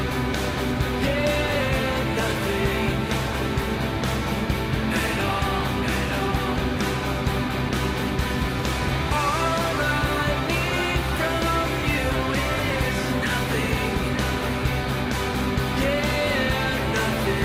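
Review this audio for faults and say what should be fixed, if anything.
Nothing stood out on listening, so there is nothing here that needs fixing.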